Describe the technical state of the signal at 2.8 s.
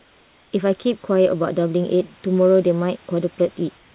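At 2.8 s the signal is intact, with the speech carried through the call path's narrowband coding that leaves nothing above 4 kHz and the room noise sitting about 35 dB below it.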